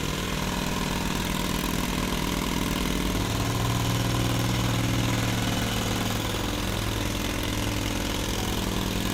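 Everyday sounds, with no technical fault anywhere in the recording. Nothing in it calls for a time or a cause.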